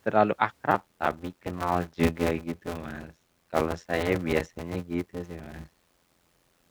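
Block size mismatch (padded) runs from 0.70 s to the end at 6.70 s. Each block arrives short and is topped up with zeros, leaving a gap every block. This produces an 86.1 Hz buzz, consistent with a 512-sample read block, and the speech slows to 0.625 times its speed with its timbre intact.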